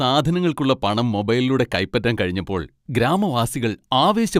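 Speech recording with no audible technical fault anywhere in the signal.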